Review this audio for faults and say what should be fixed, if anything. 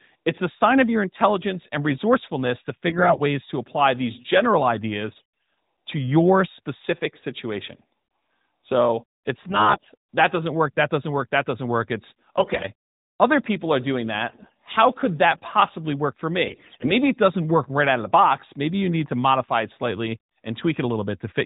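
AMR bit errors appear in six short bursts: 2.88–3.21 s, 5.18–5.56 s, 9.44–9.91 s, 12.38–12.68 s, 14.28–14.54 s and 16.46–16.89 s. Over a narrowband path whose light coding fits AMR-NB at 12.2 kbps, the speech keeps its pitch and level but turns hoarse and gargly in each burst. The finer-grained bits in the frames are corrupted while the protected core passes its checksum, so the excitation pulses and spectral values decode wrongly. The last three bursts carry a heavier error density. The fix is to improve the radio link or add stronger channel coding and frame-quality checks so corrupted frames are concealed instead of decoded.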